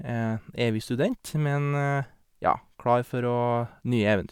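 Nothing in this speech recording needs flagging, as no technical faults turn up anywhere along it.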